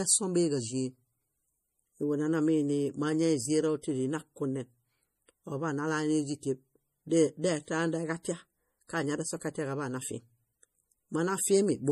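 From start to finish the speech has a watery, swirling quality and no content above 15 kHz, which points to MP3 compression at a low bitrate, likely around 40 kbps. Short of bits, the encoder cut the treble and switched weak frequency components on and off between frames.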